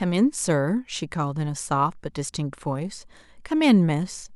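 No technical faults can be heard anywhere in this speech recording. There is nothing to place on a timeline and nothing to describe.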